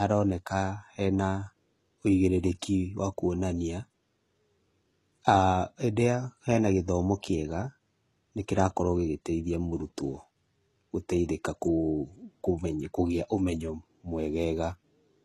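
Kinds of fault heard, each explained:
HE-AAC compression: Nothing sounds above 12.3 kHz. S sounds turn gritty and lispy, pointing to likely band replication at a low bitrate near 16 kbps.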